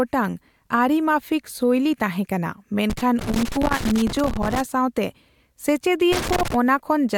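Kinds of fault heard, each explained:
Loose connector crackle: a worn or dirty contact making and breaking as it shifts, chopping the speech into an irregular scratchy burst from 2.9 to 4.6 s, right after "ᱢᱟᱯᱷᱤᱠ ᱥᱳᱭᱞᱤ ᱛᱟᱦᱮᱸ ᱠᱟᱱᱟ", and again from 6.12 to 6.54 s; its ragged, uneven spacing sets it apart from steady digital clicks or regular dropouts.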